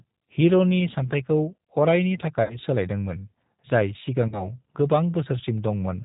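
Throughout, the speech sounds band-limited, slightly rough and synthetic, with plainly audible codec damage and nothing reaching above 4 kHz. This is the G.729 codec, and the damage is consistent with its 8 kbit/s rate. Rather than storing the waveform, it sends a vocal tract filter, a pitch predictor and a few sparse pulses per short frame, and the decoder rebuilds an approximation of the speech from those.

From 2.43 to 2.58 s, the sound is stretched out and fades. This is VoIP packet loss concealed by the speech codec. About 60 ms of audio went missing, which fits three lost 20 ms packets. The decoder filled the gap by repeating its last pitch and filter settings at steadily falling gain, and because each frame builds on the previous one, the weakened, distorted sound carries past the gap itself.

A second loss concealment, with less audio lost, follows from 4.28 to 4.50 s, again stretched and fading. 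Here about 40 ms was lost, which points to two packets, and the recovery again extends well beyond the missing audio.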